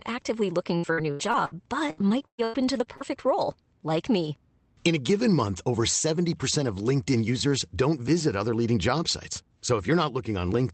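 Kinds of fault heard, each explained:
Repeated packet loss (robotic sound): packets kept going missing from about 0.77 to 3.22 s, about 11 gaps patched by stretching the last sound, leaving choppy, robotic speech.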